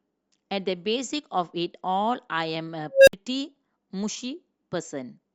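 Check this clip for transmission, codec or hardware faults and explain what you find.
There is one fault. From 2.92 s to 3.13 s the speech gives way to a squeal around 500 Hz that swells over about 157 ms, clips, then drops to 60 ms of silence. This is an unstable filter: a recursive filter with bad coefficients feeds back, overflows, and resets.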